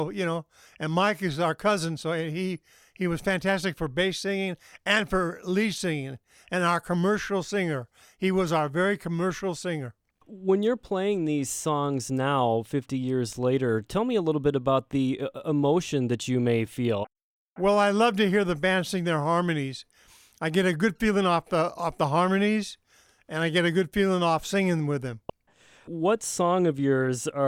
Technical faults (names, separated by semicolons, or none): none